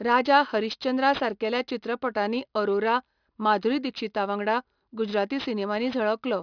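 Throughout the speech there is aliasing. The audio was downsampled without an anti-alias filter, which fits a drop from 44.1 kHz to 11 kHz. Energy above the 5.5 kHz fold mirrors back as gritty, metallic sibilance roughly 20 dB below the voice. Plain band-limiting would only sound dull, but here the spectrum runs hard to the band edge.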